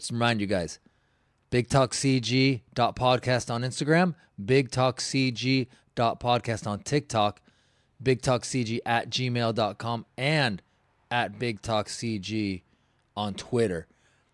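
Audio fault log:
No faults can be heard in this speech recording. There is nothing to log for it.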